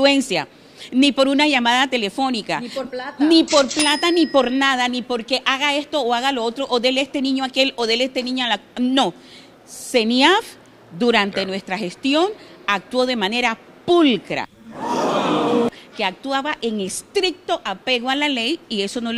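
At 3.79 to 3.81 s a single sharp loud pop cuts through, peaking roughly 15 dB above the surrounding sound, which carries on beneath it. The likely cause is a sudden electrical pulse, from a plug, switch, static discharge or driver glitch, entering the signal path.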